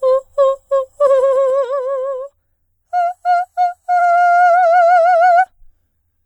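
From 1.0 to 1.76 s the music drops in level while a fine ticking rides on top of it, a quick zipping that lasts only as long as the level is falling, about 10 dB in all. This is zipper noise. The gain was lowered in coarse steps of about 2 dB, roughly seven a second, with no smoothing between them, so each jump leaves a small click.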